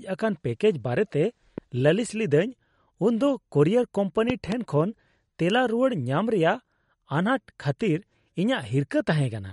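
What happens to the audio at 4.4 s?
Between 4.30 and 4.54 s there is a loud pop, two sharp pops in quick succession standing around 10 dB above the speech, likely from a sudden voltage step or pulse such as a plug, switch, static or driver glitch entering the signal path. Unlike a dropout or edit click, the speech carries on underneath, unbroken. The same stretch also carries the MP3 compression heard across the whole clip: a plainly audible watery, swirling quality as weak frequency components flicker on and off from frame to frame, with nothing above 11.2 kHz. This likely comes from encoding at a low bitrate, fitting roughly 48 kbps. The flickering artefacts set it apart from a simple low-pass filter, which would only dull the top.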